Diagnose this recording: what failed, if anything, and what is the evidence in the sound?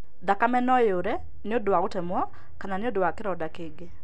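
A DC offset runs through the whole speech recording, most likely from the converter or analogue front end. The waveform sits shifted off zero by about -28 dBFS, wasting headroom. Unlike mains hum or rumble, it is inaudible: steady energy at exactly 0 Hz, with no periodic component.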